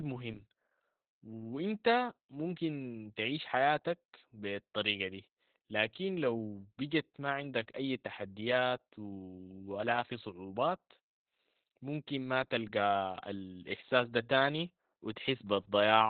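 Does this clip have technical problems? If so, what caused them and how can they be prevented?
Yes. Opus voice compression affects the whole clip. Coarse narrowband linear-prediction coding makes the speech muffled, hoarse and slightly robotic, which fits about 8 kbps. A spectrogram shows nothing above 4.5 kHz. Encoding at a higher bitrate in wideband or fullband mode prevents this.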